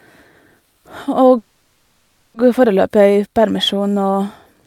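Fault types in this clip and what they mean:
call audio freeze: speech halts near 1.37 s, likely from an emptied jitter buffer; a fading buzz fills 0.97 s as flat spectrogram bands, then resumes intact.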